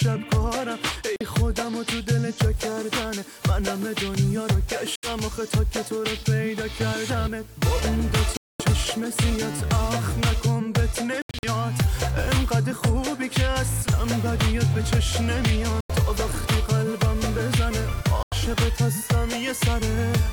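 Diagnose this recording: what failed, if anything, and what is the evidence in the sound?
The sound cuts to silence at 1.16 s (about 46 ms), 4.96 s (76 ms), 8.37 s (229 ms), 11.22 to 11.45 s (scattered gaps, longest 76 ms), and at 15.81 s and 18.23 s (91 ms each). Each time it resumes as if it had played on. This is likely a Bluetooth dropout: packets reached the headphones too late and were discarded.

From 2.53 to 10.53 s a constant, even hiss sits roughly 30 dB below the signal, with no gritty distortion. That points to low bit depth with dither at the sample-format conversion stage. The hiss fits a 7-bit signal, where dither added before rounding turns the quantisation error into steady white noise.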